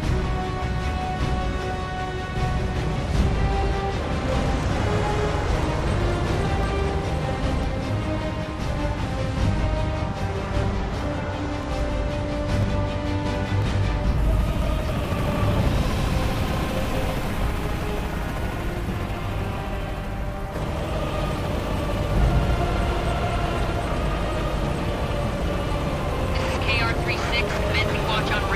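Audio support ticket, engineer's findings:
Periodic USB or driver dropouts: regular ticks every 1.0 s, 0.62 s to 27.57 s, about thirty events. Roughly a millisecond skipped each time, not silenced. Waveform shows a small step discontinuity; spectrogram shows thin vertical broadband lines. Suspect a background task stalling the USB audio bus or driver.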